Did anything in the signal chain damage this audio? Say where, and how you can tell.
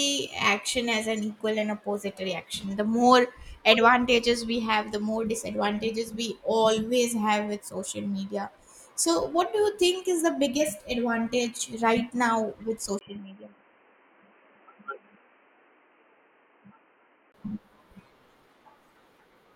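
Yes. After "advantage right now with", 12.99 to 17.34 s turns dull, cut above 3.1 kHz, slightly quieter and noisier: likely an input switched to a poorer device.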